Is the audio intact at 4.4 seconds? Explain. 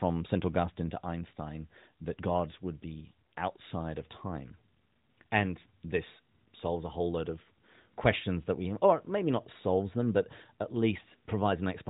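Yes, the audio is intact at 4.4 s: the speech there shows no fault, only the narrowband sound of the AMR narrowband mobile codec, which is working normally and passes nothing above about 3.8 kHz.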